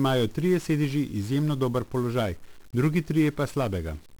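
From start to finish the speech carries the signature of 1-bit DFPWM compression. Each sample keeps only one bit, which nudges an adaptive level up or down, so the codec tracks the waveform coarsely and leaves heavy broadband quantisation noise, consistent with a stream near 48 kbps. The voice sounds fuzzy and crackly, with its upper range smothered in hiss. Unlike transform-codec damage, there is no watery swirl or band-limited smearing.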